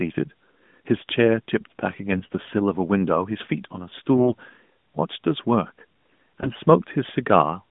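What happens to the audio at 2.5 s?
At 2.5 s the speech is near the end of a burst of AMR bit errors, running from about 2.12 to 2.53 s. On this narrowband mobile link, roughly 7 percent of the less protected bits arrive flipped. Excitation pulses and fine gain and spectral values go wrong. Pitch and level hold roughly, but the voice turns hoarse, scratchy and gargly.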